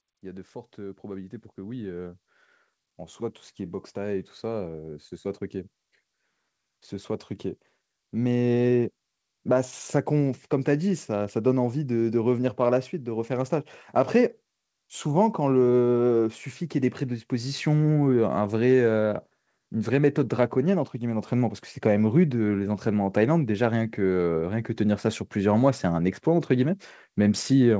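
From 0.75 to 4.84 s, automatic gain rising lifts the speech and its background by about 9 dB, then again from 6.88 to 17.66 s by about 8 dB. The gain control judged the input too quiet and raised it gradually, so the waveform envelope swells steadily while the spectrogram, bandlimited at 8 kHz by the call path, brightens uniformly.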